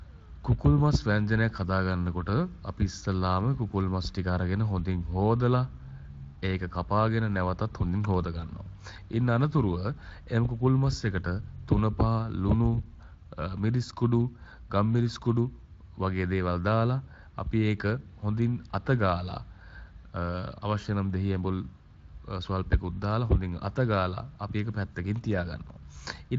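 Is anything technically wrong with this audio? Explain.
No, nothing here is technically wrong; it's speech carried through a Speex codec, with nothing above about 7.6 kHz.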